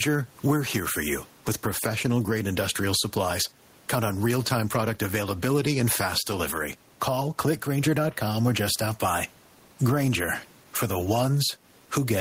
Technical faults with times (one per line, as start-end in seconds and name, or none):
0.00-12.21 gain pumping